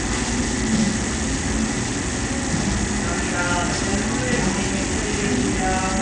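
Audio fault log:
Throughout: Bluetooth SBC compression. Nothing is present above 10.2 kHz, and the remaining top end has a gritty, grainy texture with some aliasing riding on the sound. The likely cause is a starved SBC bit pool, which fits a link around 80 kbps.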